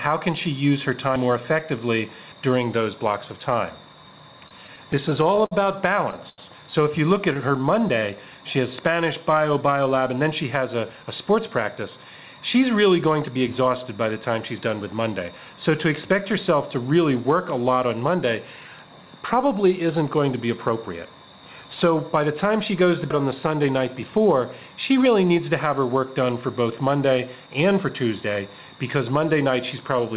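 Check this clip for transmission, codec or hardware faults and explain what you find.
Yes, there are several faults, all heard through band-limited audio with nothing above 4 kHz, consistent with a narrowband call codec.

Dropped buffer (overrun), at 1.16, 2.32, 23.10 and 27.80 s: each is an abrupt jump forward, skipping roughly 70, 70, 100 and 40 ms with no silence. The likely cause is samples being overwritten before the program collected them.

Repeated stalls (stutter), from 4.48 to 6.41 s: late packets kept draining the jitter buffer. About a dozen times the receiver stretched the last sound to fill roughly 257 ms, the longest gap 86 ms. Nothing is lost, but the audio drags and stutters.

Jitter buffer slow-down, from 7.38 to 8.01 s and again from 19.47 to 20.04 s: to rebuild its reserve, the receiver repeated pitch periods, adding about 48 and 47 ms. The sound plays at 93% speed with unchanged pitch, drawn out.

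Jitter buffer speed-up, from 9.98 to 11.49 s: with too much audio queued, the receiver trimmed short pitch-period pieces, removing roughly 100 ms. The sound runs at 107% speed at the same pitch and comes across as hurried.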